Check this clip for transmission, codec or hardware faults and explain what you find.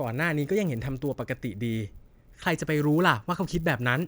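A steady 100 Hz buzz rides under the speech throughout, stopping in the gaps between phrases. This is a resampler restarted on every block. The audio is being converted from 24 kHz to 48 kHz in separate 10 ms chunks, and the converter starts each chunk without the samples from its neighbour. This leaves a small error at every chunk edge. At 100 edges per second, these errors blur into a buzz rather than distinct ticks.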